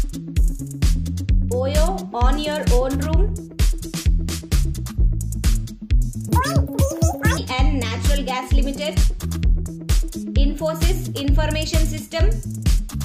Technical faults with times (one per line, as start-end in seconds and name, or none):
6.29-7.37 audio read two samples at a time (double speed)